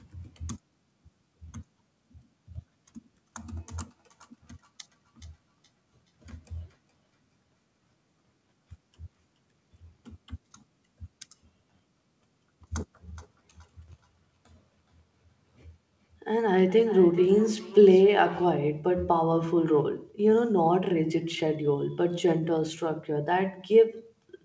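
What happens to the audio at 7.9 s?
At 7.9 s the sound is inside a stretch of feedback echo between two devices, running from 3.77 s to 9.48 s. Two devices on the same call share a room. One plays what the other's microphone sent, and that microphone picks it up again. Neither echo canceller removes sound played by the other device. So the audio returns after roughly 0.4 s, thin and faint, peaking about 45 dB below the speech.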